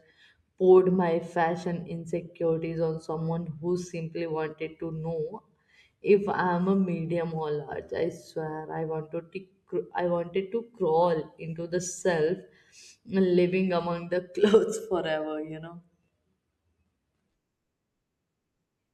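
It's a speech recording, and nothing technically wrong turns up in it at any point.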